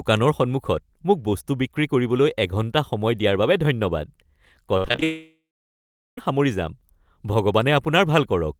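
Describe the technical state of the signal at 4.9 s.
At 4.9 s the speech is inside a burst of repeated packet loss (robotic sound), from 4.77 to 5.03 s. Five short gaps, the longest 66 ms, are each patched by extending the preceding sound, concealing about half the span. Unlike a single dropout, this gives a choppy stutter with pieces missing.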